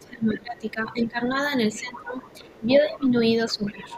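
A speech recording with two echo-canceller faults. The first is speech suppressed in double talk. The talker's level sinks from 0.0 to 1.38 s, 1.7 to 2.24 s, 2.4 to 3.16 s and 3.45 s to the end. The deepest dips are around 20 dB at the start, then about 15, 10 and 15 dB. The likely cause is both sides talking at once. The canceller could not tell the talker from the loudspeaker echo, so it pulled everything down. The second fault is the other side's voice leaking through. A faint second voice appears at 1.96 to 2.04 s, 2.23 to 2.59 s, 2.94 to 3.04 s and 3.49 to 3.96 s. It sits well below the talker, roughly 15 to 30 dB down, in short scraps. This is likely far-end audio from the loudspeaker that the canceller failed to remove from the microphone.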